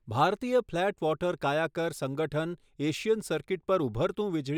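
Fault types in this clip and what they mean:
No technical fault can be heard anywhere in this speech recording. There is nothing here to list or explain.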